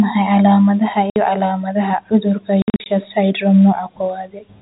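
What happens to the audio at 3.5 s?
Nothing goes wrong at 3.5 s: the speech carries on intact, with only the narrow, band-limited character of G.711 telephone coding that runs through the whole clip.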